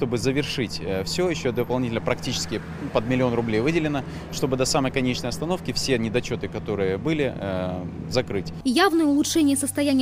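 No technical fault can be heard anywhere in the audio. Nothing in it points to a problem in how the sound was captured, processed or delivered.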